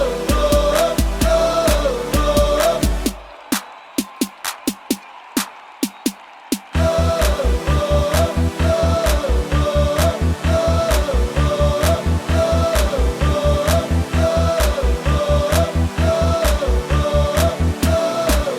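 From 1.39 s to 6.53 s a call bitrate drop makes the audio coarser and rough, with a watery texture. The encoder was starved of bits, consistent with falling from about 64 to 28 kbps, and stayed lowest for 3.57 s. A spectrogram shows blotchier, less detailed energy until recovery.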